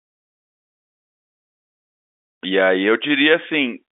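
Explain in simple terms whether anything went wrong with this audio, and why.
Nothing went wrong: the audio has the narrow sound of an ordinary phone line, and the fade-in reaching full level at about 1.5 s is a deliberate smooth edit, not a defect.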